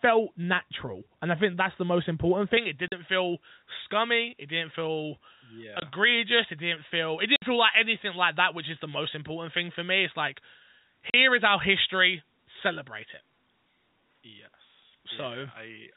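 Speech carried over a telephone-grade G.711 path, whose 4 kHz ceiling is audible throughout, with two faults on top. First, pre-emphasis was left on. From 2.57 s, just after "that's the most important", the treble boost applied before transmission is never undone at the receiving end, so the top of the band stays lifted by about 11 dB at 10 kHz relative to 1 kHz, a tilt that fits a J.17 curve. The result is a thin, glassy, over-bright sound with exaggerated sibilance that persists to the end. Second, there is packet loss filled with silence. Packets went missing in transit and the receiver inserted dead air instead of concealing the gaps. This produces hard-edged dropouts at 2.88 to 2.92 s (40 ms), 5.80 to 5.82 s (20 ms), 7.36 to 7.42 s (60 ms) and 11.10 to 11.14 s (40 ms). Their lengths all step in 20 ms units, which points to 20 ms packets.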